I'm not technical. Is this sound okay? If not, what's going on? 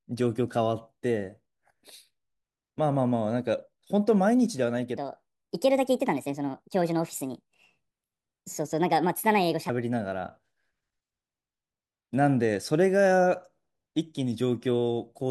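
No. From 4.97 to 9.69 seconds there is a section at the wrong speed. The speech runs 1.36 times too fast, so voices sound hurried and roughly five semitones higher. The likely cause is that this part was played back on the wrong clock.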